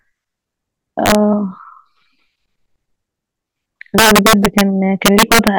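A speech clip with integer overflow in three stretches: 1.06 to 1.15 s, 3.98 to 4.61 s, and 5.06 to 5.48 s. Loud peaks there were driven past the integer ceiling, by about 4 dB in the first stretch and about 6 dB in the later two. They wrapped to the opposite sign instead of being limited, so each overshoot jumps across the full range and produces harsh cracks far sharper than ordinary clipping.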